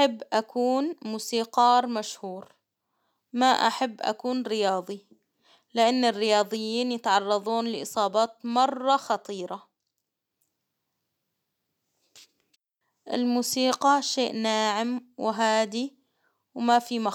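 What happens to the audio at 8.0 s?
Nothing goes wrong at 8.0 s; the speech continues cleanly through that moment with no dropout, click or distortion.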